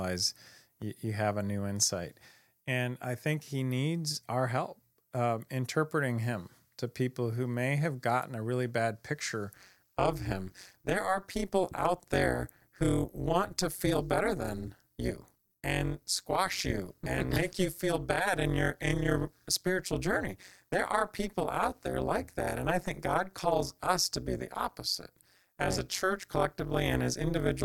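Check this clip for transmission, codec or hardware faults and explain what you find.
There's one clear fault. From 9.54 s to the end, overlap-add ripple: frames recombine with uneven gain, so level dips by about 60 dB around 200 times a second, a harsh metallic buzz.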